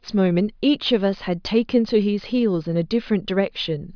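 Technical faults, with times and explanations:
Nothing in this speech recording stood out as a technical problem on listening.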